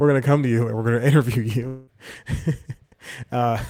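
Speech, with a long network dropout from 1.67 to 1.89 s. For roughly a fifth of a second the last sound is stretched into a fading, buzzy continuation, and the speech then resumes further on with about 200 ms simply gone. That points to the receiver concealing a likely run of lost packets. Unlike a brief single-packet glitch, the fill lasts long enough to decay audibly. Unlike a hard mute, it never drops to silence before the speech returns.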